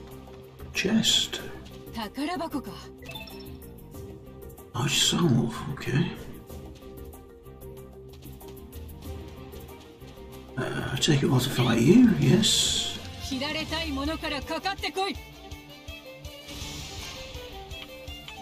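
No technical faults are audible.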